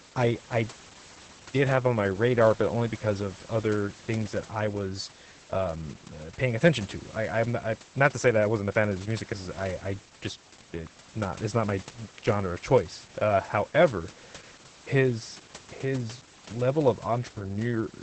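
Throughout, Opus voice compression in SILK mode removes all content above 8.6 kHz and coarsens the excitation, so speech sounds muffled and hoarse, consistent with about 12 kbps.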